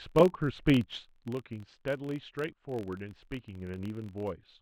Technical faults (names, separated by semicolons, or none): filter restarted on every block